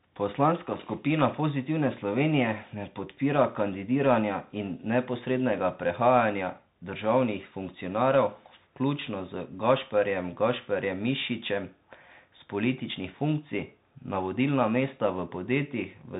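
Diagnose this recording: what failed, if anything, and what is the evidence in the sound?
The failure is at the codec stage: the speech passed through a Bluetooth CVSD headset codec throughout. Nothing above 3.8 kHz remains, s sounds are scratchy, and grainy hiss sits underneath. A one-bit adaptive-step delta coder, consistent with a 64 kbps link, cannot track fast high-frequency detail.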